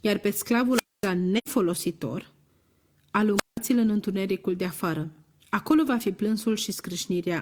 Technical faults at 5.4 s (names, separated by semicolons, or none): none